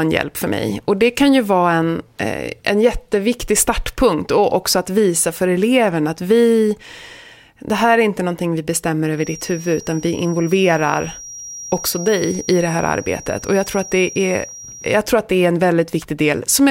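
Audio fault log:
9.12–15.04 s feedback whistle: a thin, steady 5.7 kHz tone, swelling and fading slowly, about 20 dB under the speech; likely a loudspeaker-to-microphone loop held at the edge of feedback.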